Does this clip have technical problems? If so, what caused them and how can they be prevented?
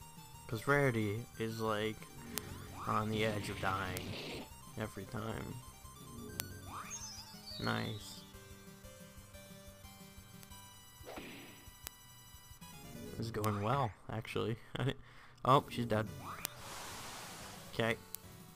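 Yes. Eight bit error spikes give sharp, broadband ticks at 2.38, 3.97, 6.40, 10.43, 11.87, 13.44, 16.45 and 18.15 s. Each is a flipped bit, one sample long, two at 18.15 s. Peaks reach about -5 to -23 dBFS. Prevent them with error-checked links and memory.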